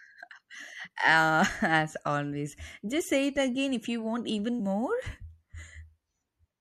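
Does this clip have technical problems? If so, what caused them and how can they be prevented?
Yes. Throughout the speech the encoder has likely applied MP3 compression at a low bitrate, and the damage is plainly audible. Its sound fits a rate around 64 kbps. With too few bits, the treble is cut off and weak frequency lines drop in and out between frames, so the speech sounds watery and swirly, s sounds turn metallic, and consonant attacks smear. To prevent this, encode at a higher bitrate or keep an uncompressed master.

Compressed frames skipped at 2.99 s and 4.59 s. Whole blocks of compressed audio were never decoded, because they were missing or rejected as damaged. Each block holds 26.1 ms. The first gap sounds like a single frame, about 30 ms, and the second like two frames, about 50 ms. The speech jumps forward each time, and because frames overlap, the join is a short smeared blip, not a click. 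To prevent this, verify file integrity and use error-protected storage or transmission.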